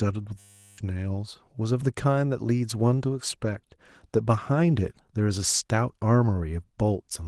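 Speech clip with a system hang loop from 0.39 to 0.78 s. A 10 ms slice repeats at 100 Hz, giving a steady buzz. About 400 ms of audio is lost while the stalled system replays its buffer.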